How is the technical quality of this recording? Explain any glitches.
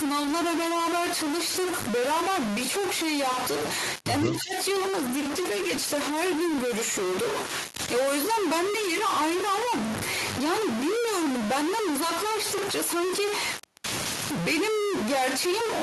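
The recording has three faults: one runs through the whole clip, and two fall close together between 4.24 and 7.33 s.

Stuck bit, throughout: a distortion sits on the speech and fills the pauses with noise. Hiss would stay steady, but this noise follows the waveform, which fits a converter bit likely jammed at one value.

Speech suppressed in double talk, 4.24 to 4.53 s: the speech dips by around 15 dB for roughly a third of a second. The echo canceller likely ducked the near talker while the far side also spoke.

Call bitrate drop, 4.89 to 7.33 s: the speech turns rough and muffled, at its worst for 1.37 s. The dulled highs fit a fall from 32 to 14 kbps. The speech comes through with coarser detail.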